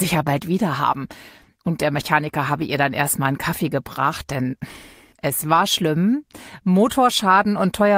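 Nothing stood out on listening to this clip.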